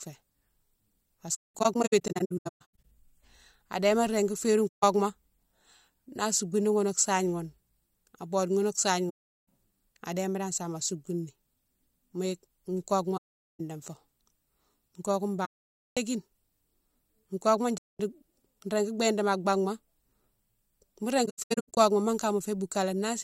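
The speech drops out in soft-edged holes from AAC frame loss with muting at 1.4 to 2.8 s (scattered gaps), 4.68, 9.09, 13.17, 15.45, 17.78 and 21.25 s. Missing frames were zeroed, so the overlapping windows fade the sound out and back in.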